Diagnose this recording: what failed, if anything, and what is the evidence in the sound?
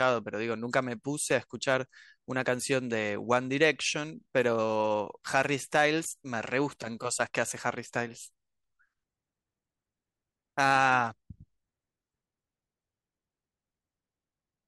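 Hard clipping occurred at a stage that ran out of headroom, most plausibly the converter or a fixed-point format limit. The speech overloads from 1.34 to 1.75 s, by about 1 dB, producing light crackle on the peaks. It overloads again from 5.35 to 5.85 s, by about 3 dB, where the roughness becomes a more obvious harsh edge. In both spans the waveform peaks are sheared flat, and those squared tops add high-frequency harmonics to the sound.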